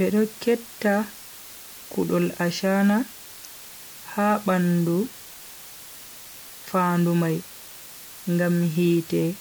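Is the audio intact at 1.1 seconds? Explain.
No. The speech is quantised to only 6 bits throughout the clip, with dither added before rounding, so at 1.1 s the rounding error becomes a steady, even hiss roughly 20 dB below the speech, with no gritty distortion.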